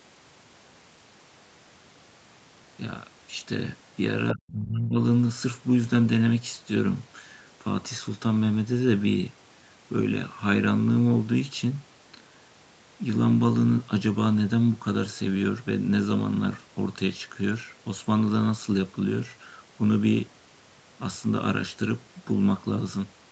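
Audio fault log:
4.28–4.52 s, other side's voice leaking through: a faint second voice sits about 10 dB under the talker, likely far-end loudspeaker sound the echo canceller left in; it is something added, not the main voice failing.
4.33–5.0 s, speech suppressed in double talk: while the leaked voice overlaps, the talker's own level drops sharply, roughly 25 dB at its deepest, and the affected stretches add up to about half a second. The echo canceller likely turned both voices down; unlike plain dropouts, this ducking coincides with the overlapping far-end sound.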